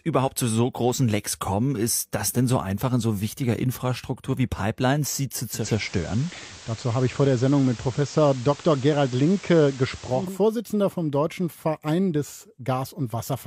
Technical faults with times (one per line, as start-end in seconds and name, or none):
5.47-10.40 digital radio blending to analogue